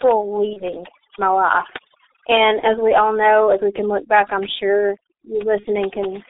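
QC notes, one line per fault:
Throughout, overdone noise removal: The background drops, broken by twinkling specks. The suppressor cuts individual frequency bands whenever they sit close to its noise estimate, so low-level parts of the speech get pulled down with the hiss. The isolated specks set it apart from codec damage, which degrades the whole band evenly rather than gating it.
Throughout, G.723.1 codec: The speech is muffled and hoarse, with smeared consonants. The band runs only from 300 Hz to 3.7 kHz, which removes the low warmth and all the sibilant air. The heavy, rough coarseness fits a very low bitrate near 6.3 kbit/s and a speech model that updates only every 30 ms, so fast changes blur together. Unlike the noise-removal artefacts, this roughness sits in the speech itself rather than in the gaps.
0.53–0.62 s, 2.60–2.67 s, 5.60–5.67 s, VoIP packet loss concealed by the speech codec: Three brief stretched patches occur: just before "my life", just before "we all know as", and just after "look back I'm sure". 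Each gap fits one lost 30 ms frame. The decoder repeats its last pitch and spectral shape at falling gain, and the speech stays weak for a short time after packets resume. These are local smears, not the steady roughness of the codec.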